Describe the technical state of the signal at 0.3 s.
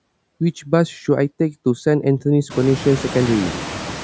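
At 0.3 s the background noise dips in the gaps and swells back under the speech. These are noise suppressor artifacts, present throughout the clip. The suppressor lowers bands it judges to be steady noise frame by frame, cutting about 5 dB. The band-limited call microphone processing, with nothing above 8 kHz, sits underneath.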